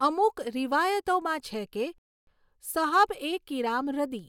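From 0.72 s to 4.19 s, word clock ticks recur about every 0.7 s, around five in all. The receiving device runs on its own clock instead of locking to the sender's digital link. The two clocks drift apart by roughly 30 parts per million, and each time they slip past each other a single sample is dropped or repeated. Each slip is heard as a sharp tick. On a spectrogram every tick is a thin vertical line spanning the full frequency range, and the lines are evenly spaced. In the waveform each one is a one-sample discontinuity.

At 1.98 s a rebuffering stall cuts the speech to silence for 289 ms. The player ran out of downloaded audio and waited for more to arrive. At 2.27 s the speech resumes exactly where it stopped, so nothing is lost, but time is added. The waveform shows a flat silent band between two abrupt edges, and the spectrogram shows a clean empty gap with no fade on either side.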